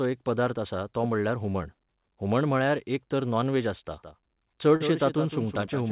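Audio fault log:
1.52–1.56 s and 4.76–4.82 s, short concealed packet loss: about 20 ms, then about 40 ms of audio arrived too late, and the receiver patched each gap by stretching the preceding sound. The first comes right after "पदार्थ आसा तो म्हणल्यार" and both come across as a quick smear or wobble.
3.93 s to the end, doubled audio track: right after "एक तर नॉन व्हॅज" a second full-band copy kicks in abruptly about 150 ms behind and roughly 10 dB down. It's dry with no room tail, so it sounds like a flat echo, likely from a slower second capture path.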